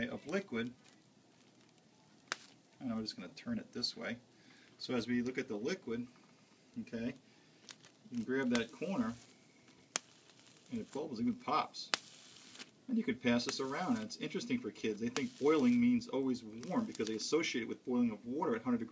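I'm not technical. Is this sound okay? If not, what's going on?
Yes, this sound is okay. Nothing in it goes wrong at any point, so there is nothing that needs fixing.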